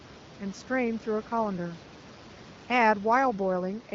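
Nothing stood out on listening to this speech recording, with the room's background noise sitting about 24 dB below the speech.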